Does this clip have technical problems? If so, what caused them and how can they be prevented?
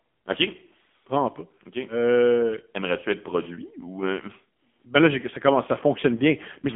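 Yes: the whole clip carries AMR narrowband mobile codec damage. The speech has been squeezed through an 8 kHz phone codec that rebuilds each 20 ms frame from a vocal-tract model and a few pulses, and the heavy buzzy, synthetic texture fits a low mode of around 6.7 kbps. On a spectrogram the energy sits in a band from about 200 Hz to 3.4 kHz, with nothing above 3.6 kHz, so the upper half is empty; the waveform looks smoothed and pulse-like. To prevent it, record locally or use a wideband, higher-bitrate path instead of a narrowband mobile call.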